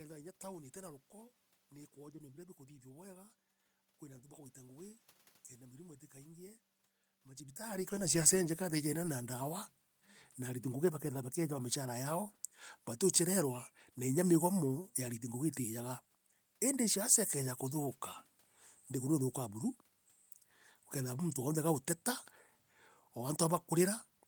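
Nothing is technically wrong with this speech recording; the background room noise and the change in level around 7.5 seconds, when the talker moves relative to the microphone, are part of the recording itself.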